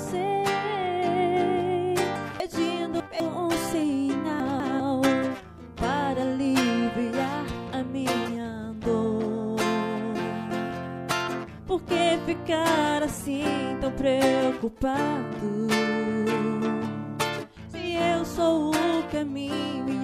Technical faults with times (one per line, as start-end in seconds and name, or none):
2.40-3.20 chunks out of order
4.40-4.80 chunks out of order